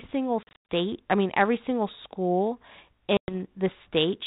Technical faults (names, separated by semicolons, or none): packet loss on an ADPCM call